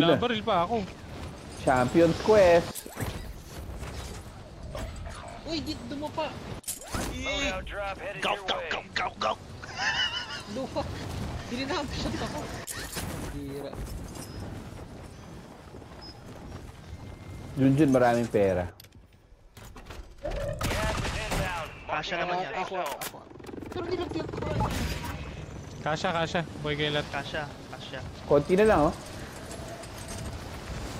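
No technical faults can be heard anywhere in the audio.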